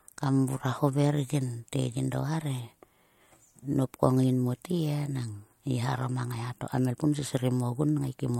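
No technical faults can be heard anywhere in this speech recording, and the signal holds steady from its opening to its close.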